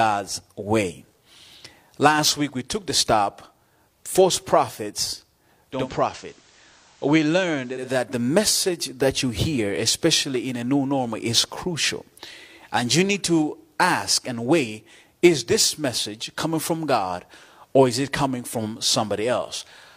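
Speech, with one episode of digital radio blending to analogue between 5.69 s and 7.90 s. The receiver lost its digital signal and cross-faded, over about 0.2 s, to the station's FM broadcast. The level drops by about 2 dB, and FM hiss appears at roughly 30 dB below the speech. At 7.90 s the receiver fades back to digital, and the level returns.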